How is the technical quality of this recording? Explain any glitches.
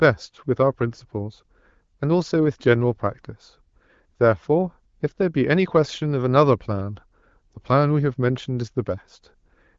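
No glitches can be heard in this speech recording.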